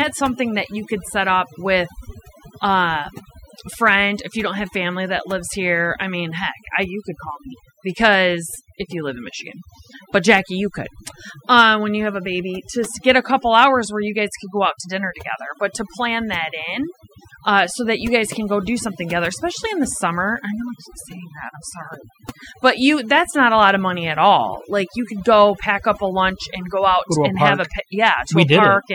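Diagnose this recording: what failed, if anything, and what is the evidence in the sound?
The failure is overdone noise removal in the processing stage, and it runs through the whole speech recording. The background drops away, broken by twinkling specks where stray bands flicker on and off. The suppressor was set too aggressively. Any frequency band close to its noise estimate gets pulled far down or shut off. The quieter parts of the voice fall under that threshold and vanish with the noise.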